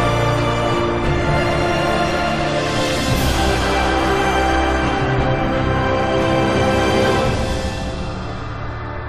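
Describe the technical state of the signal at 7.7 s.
Nothing at 7.7 s points to a fault; the signal runs on without a gap, click or other disturbance.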